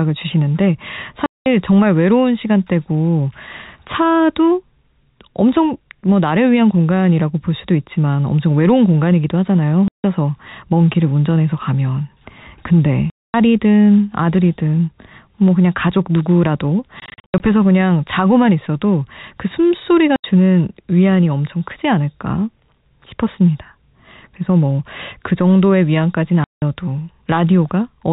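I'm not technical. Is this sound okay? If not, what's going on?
No. The speech has packet loss filled with silence: chunks of audio went missing in transmission and were replaced by abrupt gaps, which fits 20 ms packets. The gaps fall at 1.26, 9.88, 13.1, 17.0 (several short scattered breaks over 0.4 s), 20.16 and 26.44 seconds, each lasting under a quarter second.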